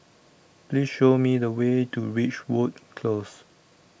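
No technical faults are audible.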